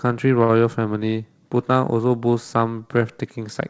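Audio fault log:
0.44–0.51 s, short stall from a late packet: the jitter buffer ran empty, so the last sound was stretched by 52 ms until the packet arrived and then resumed where it left off, with nothing lost.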